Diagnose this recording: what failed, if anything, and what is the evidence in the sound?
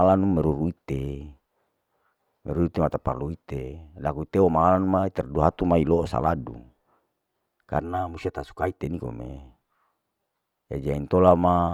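Between 7.80 and 8.80 s the speech turns hollow and phasey, which points to a channel delay (comb filtering) at the driver or buffer stage. One channel ran about 3 ms behind the other before the two were summed to mono, so shared content cancelled at evenly spaced frequencies, with the first notch near 200 Hz. The notches stay fixed rather than sweeping as in flanging, and the tone returns cleanly after 8.80 s, unlike lasting room colouration.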